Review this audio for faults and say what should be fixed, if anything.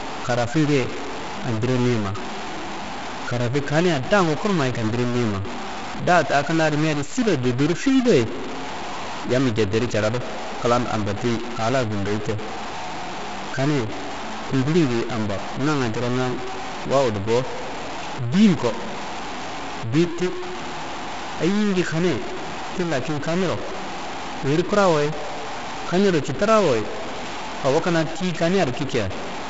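Stuck bit, throughout the clip: the speech carries distortion from start to finish, and the pauses fill with noise. That pattern fits one data bit stuck at 0 or 1, likely from a broken data line or a faulty converter. When a bit is stuck, roughly half the samples are wrong by that bit's weight. In quiet passages that bit changes with the sign of small values, which is why the gaps hiss rather than fall silent. The G.722 wideband coding at 48 kbit/s is a separate path, band-limited near 7.7 kHz. To prevent it, test the converter and its data lines with a known signal and check each bit toggles before recording.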